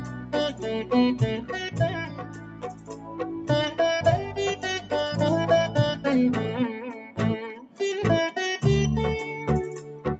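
Throughout the clip a noise suppressor built for speech is applied to the sound, treating sustained and ambient content as noise. Its gain moves over a range of around 10 dB, so onsets pass while held material and decays are pulled down, giving pumping, flutter or thinning. On a waveform the envelope rises at each attack and then sags early. On a spectrogram, sustained partials and tails fade abruptly rather than decaying smoothly. The band stops near 8 kHz, consistent with call microphone processing.

Four stretches show sound cut by the noise suppressor: 0.00–0.33 s, with a dip of about 7 dB; 2.05–3.19 s, the longest at about a second of attenuation and a drop of about 8 dB; then 6.94–7.18 s and 7.56–7.80 s, each around 0.2 s and about 8 dB down. In these spans the steady content sinks. The waveform shows a visible notch in the envelope, and the spectrogram shows a darker band across the affected frequencies.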